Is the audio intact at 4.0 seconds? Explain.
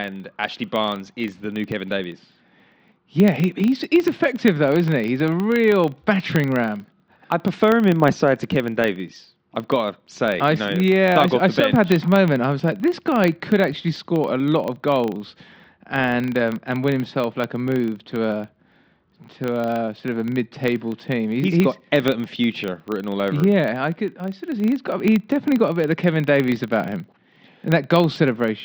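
No. At 4.0 s, as everywhere else in this speech clip, the filter is restarted on every block. It drops its internal state at each block boundary and starts again from silence, so every block opens with a small transient. Those ticks repeat 25 times a second, one every 40 ms, and blend into a low buzz riding under the talker. The buzz gets louder when the speech gets louder and fades in the quieter stretches.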